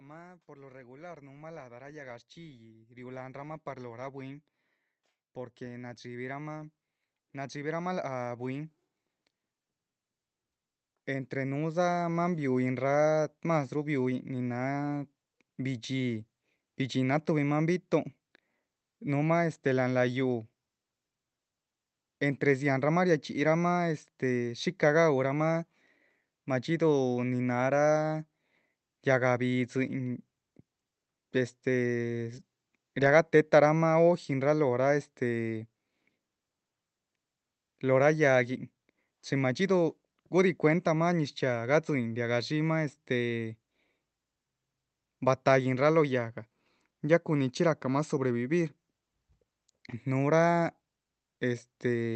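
From 0.46 s to 16.17 s, automatic gain rising: the gain control judged the input too quiet and kept pushing its gain up, about 23 dB overall. The speech and the background noise swell together steadily, while the call codec's top end stops near 8 kHz.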